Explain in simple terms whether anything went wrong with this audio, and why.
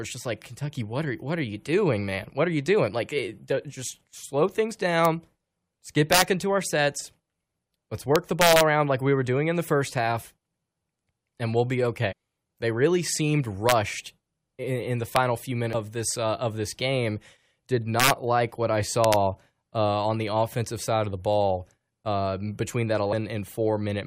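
Something did go wrong in two ways in this speech recording.

The main one is integer overflow. When the audio gets loud, the numbers holding each sample run past the biggest value they can store. Instead of stopping at the ceiling, they wrap around to the opposite extreme, so each peak jumps across the whole range and you hear a harsh crack, much sharper than ordinary distortion. It happens at 5.05 s, 6.13 to 6.22 s, 8.16 to 8.61 s, 13.69 to 13.72 s, 15.16 s, 18.00 to 18.10 s and 19.04 to 19.14 s. The stretch around 8.2 to 8.6 s is the longest.

The other is damaged data in a compressed stream. Some bytes of the compressed file are wrong, so the decoder can't read that bit properly, loses its place and hunts for the next clean frame. That gives a short chirp or blip at 12.11 to 12.13 s and again at 15.73 s.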